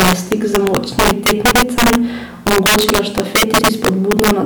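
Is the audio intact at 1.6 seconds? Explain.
No, 1.6 seconds falls inside an overlapping-chunks fault that runs from about 1.51 to 1.61 s, right after "je stik z močnimi". The speech seems to have been handled in 2-second chunks, and this one starts before the previous one finished, so about 100 ms of audio gets played twice at the join. You hear it as a quick stutter or click at the join.

That same stretch also carries the integer overflow that runs through the whole clip. The level is pushed roughly 10 dB too hot, and instead of being limited, the loudest peaks wrap past the maximum integer value and flip to the opposite sign. Only a small share of samples, around one in twenty, cross that line, but each one jumps across the full range. The result is harsh, violent cracks on the loud parts, much nastier than ordinary clipping.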